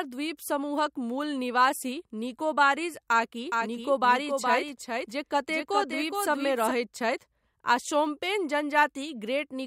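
From 3.51 to 6.71 s a doubled audio track appears: a second, somewhat quieter copy of the speech trails the original by roughly 0.4 s, likely from a second capture path or misaligned edit. Unlike an echo, it has no decay or room colour and cuts in and out abruptly.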